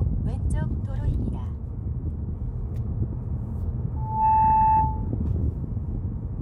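A microphone is picking up the loudspeaker it feeds, and at 3.96 s the loop gain climbs past one at a single frequency, producing loudspeaker feedback squeal. The ringing locks onto a tone near 876 Hz, swelling over roughly a third of a second until it sits about 10 dB above the rest of the sound. It holds as a piercing, steady whistle, then stops at 5.10 s.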